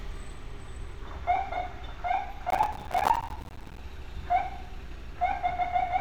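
From 2.50 to 3.79 s, processor overload crackle: many missed deadlines on buffers of about 5 ms leave silent gaps, heard as gritty tearing and seen as broadband vertical streaks and waveform dropouts.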